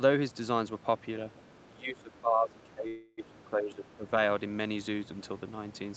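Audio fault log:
1.36–1.41 s: other side's voice leaking through. A brief, faint scrap of a second voice slips in, about 35 dB below the talker. The likely cause is loudspeaker echo that the echo canceller left in the microphone signal.
1.66–4.07 s: speech suppressed in double talk. The talker's level dips in patches, roughly 15 dB at the deepest, over about two seconds in total. The likely cause is the echo canceller turning everything down while both sides spoke at once.
2.87–3.20 s: call audio freeze. The sound stalls for 302 ms, stretched out as a fading buzz, never falling to silence. It then resumes where it stopped, so nothing is lost but the rest arrives late. Delayed packets likely emptied the jitter buffer.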